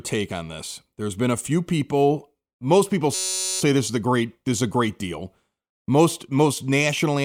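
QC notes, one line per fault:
3.14–3.61 s, system hang loop: after "few people most people" the sound freezes into a steady buzz at about 188 Hz until "this is a" resumes. The driver stalled while the hardware kept replaying one 5.33 ms slice of its ring buffer, which fits a 256-sample buffer, about 87 times over. Because each repeat is identical and very short, it fuses into a rigid pitched tone rather than the stutter of a longer loop or the silence of a dropout, and almost no audio goes missing.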